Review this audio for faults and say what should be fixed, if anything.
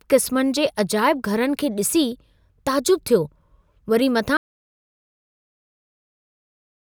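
Audio dropout to silence from 4.37 s to the end: the speech cuts off abruptly into silence, with no room tone, unlike a fade or noise gate. The cause is likely a lost input feeding the recorder, so secure cables and monitor input levels throughout recording.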